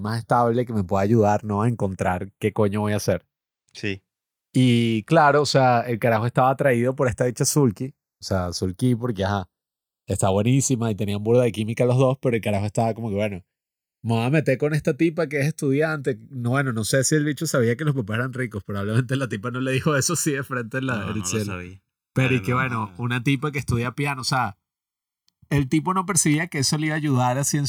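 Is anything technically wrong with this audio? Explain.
Yes. Throughout the speech there is a slow, swirling flanging, a hollow sweep that drifts gradually through the tonal balance, arising because the two channels were summed to mono. This is the channels drifting apart: the left and right sides seem to come from devices on separate clocks, off by something like 50 parts per million, so the timing gap between them creeps upward to around a millisecond by the end. Combining them produces comb-filter notches that move steadily as that gap grows.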